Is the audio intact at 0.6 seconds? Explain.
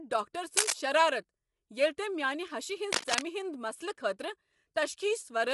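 No. From 0.57 to 0.73 s there's cable scratch noise sitting a few dB above the speech: dense, uneven scratchy bursts, the kind you get when a worn cable or connector is moved and its contact resistance jumps around rapidly. That's the likely cause here.

Underneath that, the whole clip carries low-delay AAC compression, likely AAC-ELD at a rate around 32 kbps. The voice is plainly grainy and rough, with noise creeping between the harmonics, and there's nothing above 11.6 kHz.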